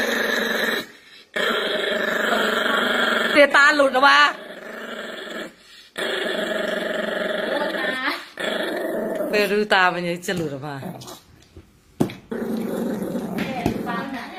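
At 3.35 s the audio performs a skip ahead. Roughly 0.7 s of material was discarded, either lost in transit or dropped by an overfull jitter buffer, and playback jumps straight to later audio with no fill in between. It sounds like an abrupt splice, with the sound on either side butted together mid-gesture. A waveform shows no silent gap, only a sudden change in envelope. A spectrogram shows a hard vertical seam where the spectral patterns fail to line up.

From 3.58 s to 5.22 s a jitter buffer speed-up follows. The receiver was holding more delay than its target, so it trimmed short pitch-period slices again and again, removing around a fifth of a second overall. The sound runs at 112% of normal speed with unchanged pitch, giving a rushed, compressed feel. On a spectrogram the harmonics stay at the same frequencies while events crowd closer together in time. The waveform shows whole cycles removed at repeated points.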